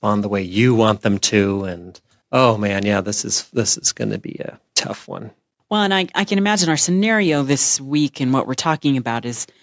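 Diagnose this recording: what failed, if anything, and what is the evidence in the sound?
Nothing failed in this recording.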